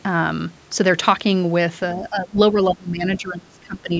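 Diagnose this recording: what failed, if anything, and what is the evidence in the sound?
Between 1.96 and 3.93 s the speech dips and breaks up, about 1.5 s in all, down about 20 dB at worst. The stage is call processing. The likely cause is speech suppressed in double talk. The echo canceller mistook the talker for loudspeaker echo and turned both down.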